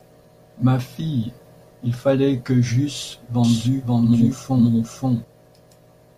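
A doubled audio track runs from 3.44 to 5.24 s in this speech clip. A second full-band copy of the speech sits about half a second behind the original, at roughly the same level, with no reverberant tail or room colouring. Both its entry and its exit are abrupt. The likely cause is the same signal reaching the mix twice, once through a slower path, so the two copies overlap out of step.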